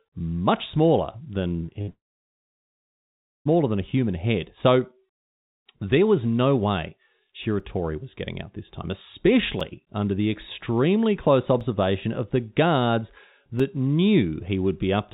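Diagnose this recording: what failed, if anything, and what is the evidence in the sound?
Repeated packet loss (robotic sound), 1.48 to 1.89 s, right after "much smaller": a network-stage fault. Four short holes, the longest 58 ms, cover about a quarter of that span. Each hole is papered over by extending the preceding sound, giving a choppy stutter.

Long network dropout, 1.89 to 3.47 s, ending just before "than a human head": about 1.56 s of audio never arrives. A brief smeared continuation fades into roughly 1.5 s of silence, and the sound resumes with that stretch missing. The cause is likely a network outage upstream of the receiver.

Periodic USB or driver dropouts, 7.6 to 13.6 s: about four tiny gaps, each roughly 4 ms of silence, spaced exactly 2.0 s apart, heard as regular ticks while sound is present. The strict timing points to a recurring task stalling the driver or USB bus. 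All of this sits within narrowband telephone audio with nothing above 4 kHz.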